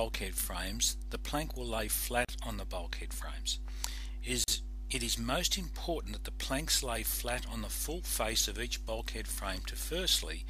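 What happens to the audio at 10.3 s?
Nothing goes wrong at 10.3 s; the audio carries on intact through that moment.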